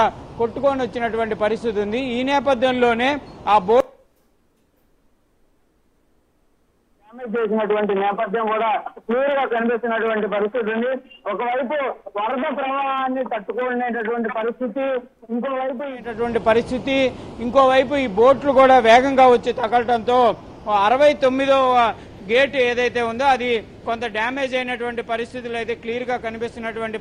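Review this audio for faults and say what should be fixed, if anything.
No technical faults can be heard anywhere in the signal, so nothing needs to be fixed.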